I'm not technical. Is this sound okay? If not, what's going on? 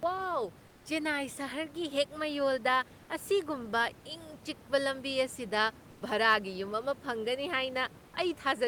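No. From 0.67 to 0.85 s, about 180 ms of the real room background is replaced by comfort noise: a smooth, featureless hiss, slightly quieter than the room noise around it. This is likely the sender pausing transmission during a gap in speech and the receiver filling in synthetic noise.

At 5.91 to 6.01 s, the voice detector dropped sound: roughly 50 ms of actual speech is lost and 100 ms of steady filler noise plays instead. The detector likely mistook quiet speech for background, stopped sending, and resumed when the speech grew strong enough again.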